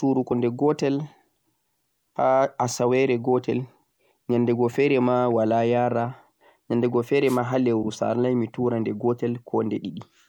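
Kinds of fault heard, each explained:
Compressed frames skipped: at 0.30 s and 7.83 s roughly one 26.1 ms frame of compressed speech goes unplayed, so the audio jumps ahead by about 30 ms. Overlapping frames smear each join into a soft blip, a brief spectrogram discontinuity with no sharp click.
Wireless microphone noise hit: from 7.26 to 7.38 s the microphone's FM radio signal fades as reflections cancel, and receiver noise swells into a short swish of static over the speech, seen as a broadband hiss band and thickened, fuzzy waveform.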